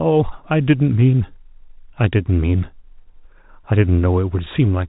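No technical faults can be heard in the speech, which comes through the narrow band of ordinary G.711 telephone coding, with nothing above 4 kHz and at most a faint quantisation noise riding on the signal level.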